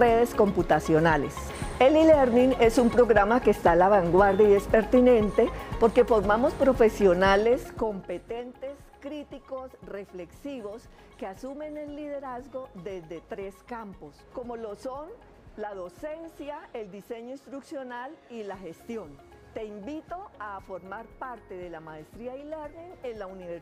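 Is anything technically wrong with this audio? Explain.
Yes. Zipper noise runs from 7.34 to 8.46 s. The level drops by about 15 dB there, but in coarse steps of about 3 dB, with no smoothing between them. That is roughly five steps a second. Each jump makes a tiny click in the waveform. Together the clicks form a ticking, zipping texture riding on the sound as it fades.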